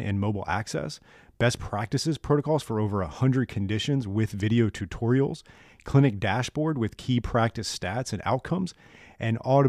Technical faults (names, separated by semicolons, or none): none